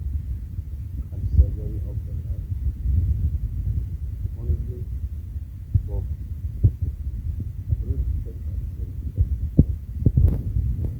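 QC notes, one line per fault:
Throughout: Opus compression. Speech turns grainy and rough, with tones gone noisy, while the bandwidth still reaches 20.1 kHz. This is likely Opus in CELT mode at a rate that fits 24 kbps, filling starved bands with noise. A spectrogram shows speckled, smeared upper bands without gaps.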